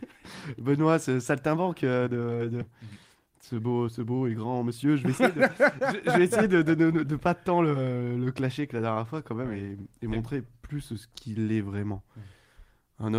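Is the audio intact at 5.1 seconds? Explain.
No, not quite. At 5.1 seconds you're inside a jitter buffer speed-up that runs from about 2.71 to 6.72 s. The receiver had built up more buffered audio than it wanted, so it trimmed out short chunks, each a pitch period or so, over and over to catch up. That plays things about 8% fast, shaving off roughly a third of a second in total. Pitch stays put, but the sound comes across a bit rushed.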